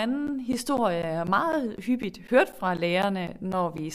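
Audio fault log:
0.27–3.78 s, periodic USB or driver dropouts: a steady run of short gaps recurs every 0.25 s, about fifteen in all, each losing roughly 10 ms of the speech and filling it with silence. Something in the system appears to stall the USB bus or audio driver on a fixed schedule, so the stream briefly cuts out at each stall. Because the gaps fall at an even four per second, they form a regular ticking that is heard only where the speech is sounding.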